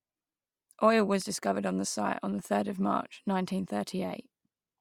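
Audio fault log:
throughout Bluetooth LC3 compression: likely LC3 coding in 10 ms frames, fitting a 48 kbps stream, swaps upper-band detail for noise, leaving the speech plainly breathy and grainy.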